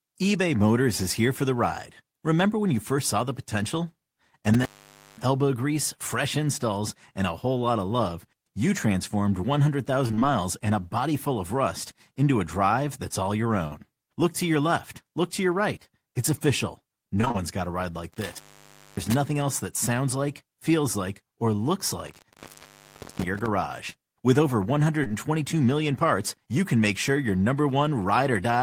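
A loose plug or cable, an intermittent contact, opens from 4.54 to 5.24 s, cutting the speech for about half a second with crackle at each edge and faint hiss in the gap. At 13.67 s, 40 ms of audio never reached the decoder; this short concealed packet loss is patched by extending the last sound, leaving a brief smear. From 17.21 to 17.36 s, repeated packet loss hits four times, the longest hole 24 ms, with nearly half the span synthesised, so the speech turns choppy and robotic. The intermittent contact returns from 18.12 to 19.14 s, dropping out for about 0.6 s, and again from 22.07 to 23.48 s, the longest break at about 0.8 s, each cut framed by crackle. Two back-to-back 20 ms losses at 25.04 and 25.08 s are concealed the same way, heard as a quick wobble.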